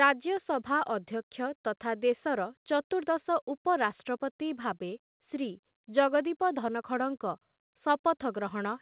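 No technical faults can be heard anywhere in this speech recording. It has passed through a call path that appears to be working as intended, and its band-limited sound, with nothing above 4 kHz, fits a narrowband telephone codec such as G.711 mu-law.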